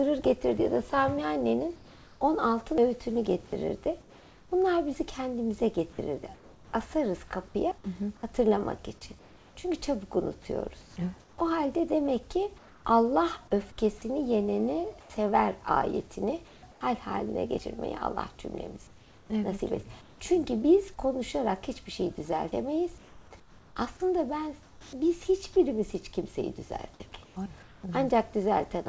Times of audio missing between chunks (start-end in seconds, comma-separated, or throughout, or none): 2.78, 7.71, 12.65, 17.59, 22.52